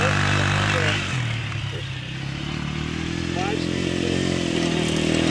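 No faults detected anywhere in the clip.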